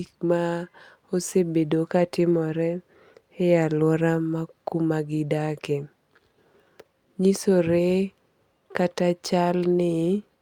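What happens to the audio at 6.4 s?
At 6.4 s you're inside a run of repeated timing corrections from 0.37 to 10.07 s. The receiver keeps trimming tiny slices to keep up, so the speech jumps slightly with small, uneven hiccups. The root is clock drift between sender and receiver: the sender's clock runs about 4 percent fast, so the buffer overfills and playback ends up at 104% pace.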